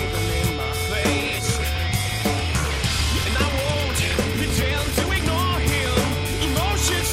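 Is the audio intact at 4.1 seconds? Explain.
No. Between 3.22 and 5.34 s the audio runs rushed at unchanged pitch, likely a time-stretched section sped up 1.54x by dropping short pieces.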